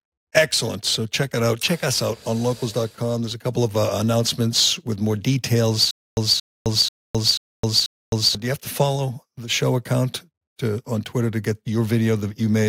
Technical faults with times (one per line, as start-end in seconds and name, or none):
0.00-12.68 block size mismatch (truncated)
5.91-8.35 stutter with silent gaps